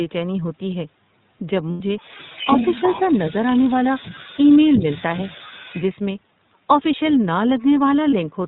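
The whole recording carries the iLBC codec's narrowband character. Nothing above 4 kHz survives, and the speech has a slightly rough, synthetic edge. The coding damage is plainly audible and fits 30 ms frames at 13.33 kbps.

From 1.71 to 1.80 s there are lost iLBC frames. For 90 ms the decoder fills the gap by repeating the last pitch period with added noise, which gives a held, faintly buzzy vowel. The duration fits three missing 30 ms frames, and clean speech resumes immediately afterwards.

From 1.98 to 5.82 s a second, quieter voice is audible, around 10 dB below the main talker. This is the other side's voice leaking through, likely loudspeaker echo that the echo canceller failed to remove from the microphone signal.

Within that stretch, from 4.78 to 4.85 s, the main talker dips by a few dB for about 70 ms. This points to speech suppressed in double talk: the canceller likely attenuated the near-end voice along with the echo while both sides overlapped.

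At 8.11 to 8.13 s another 30 ms dropout produces a brief buzzy fill. This is consistent with a single lost iLBC frame, and the speech recovers at once.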